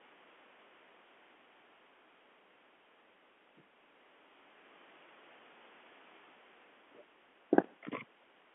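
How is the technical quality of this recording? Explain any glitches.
Nothing stood out on listening to this speech recording, which has the narrow band of a telephone line.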